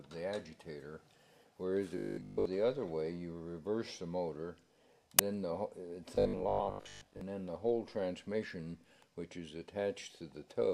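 From 1.98 to 2.46 s the sound turns into a rigid, metallic buzz at 50 Hz, with nearly all of it replaced by repetition. It returns from 6.15 to 7.21 s, where most of the stretch carries the same 50 Hz buzz. This is robotic sound from repeated short buffers, likely because new audio arrived too late and the last 20 ms was looped in its place, so the loop rate set the buzz.

At 5.19 s a brief, loud burst of digital noise cuts through, lasting about 5.8 ms, which fits a 256-sample block. This is an uninitialised buffer: the block was sent to playback before any audio had been written into it, so whatever values were left in that memory were played out as samples.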